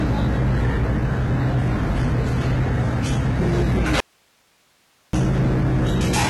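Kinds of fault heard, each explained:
hard clipping: The sound is driven about 17 dB past what the chain can pass, so roughly a fifth of the samples are sliced off flat. The waveform shows squared-off plateaus, the spectrogram shows harmonic smear climbing high, and every loud moment carries harsh fuzz.
HE-AAC compression: The spectrogram shows nothing above 11.8 kHz. The treble below that cutoff looks like copied, coarsely shaped bands rather than true detail, and it sounds gritty and metallic. This points to heavy damage, likely from HE-AAC v2 at a low bitrate around 16 kbps.
audio dropout to a faint residue: From 4.00 s to 5.13 s, about 1.13 s, the sound vanishes abruptly, leaving only hiss roughly 40 dB below the signal. The waveform collapses to a thin noise band with sharp edges, and the spectrogram shows a blank stretch of faint broadband haze.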